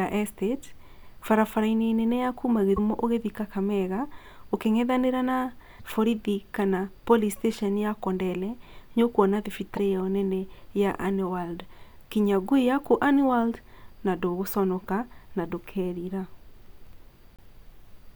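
Broken MP3 bit reservoir at 2.76 s after "nene ya kuuma", 5.79 s, 9.76 s after "nĩ ũkwona", and 17.36 s. Each is a garbled 28 to 38 ms blip with a skip ahead, in a stream of 26 ms frames. It is likely caused by dropped frames, so the next frame borrowed the wrong bytes.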